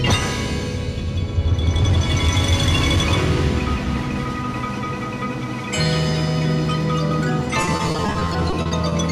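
Repeated packet loss (robotic sound) from 7.61 to 8.92 s: rapid gaps of up to 30 ms, each patched by extending earlier audio, leave this audio choppy and robotic.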